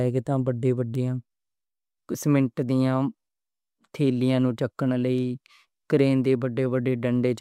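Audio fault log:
0.95 s and 5.18 s, bit error spike. Each is one sharp tick, lasting only two or three samples. The first peaks at about -22 dBFS, the second at about -28 dBFS. A flipped bit throws the sample value off by a power of two, then it snaps straight back. That near-instant jump carries energy across the whole spectrum. So the tick sounds bright and hard, with no link to the speech around it.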